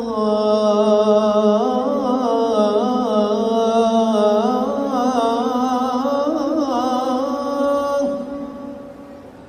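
Video or display buzz appears from 7.38 to 9.38 s: a 75 Hz buzz with hash above it, sitting roughly 40 dB below the sound. A screen or video cable is coupling its field-rate signal into the audio path, leaving this interference in the audio.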